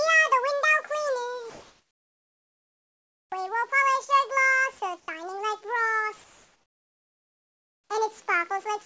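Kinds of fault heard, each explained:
Comfort noise in place of the background: from 1.50 to 3.32 s and 6.24 to 7.90 s the background becomes a steady, featureless hiss, about 2 dB louder in the first gap and about 3 dB quieter in the second, likely synthetic noise filling a discontinuous-transmission pause.
Sound dropped by the voice detector: between 5.00 and 5.08 s about 60 ms of sound disappears under a brief patch of comfort noise, then returns. The sender's voice detector likely took it for background and stopped sending, so comfort noise replaced it.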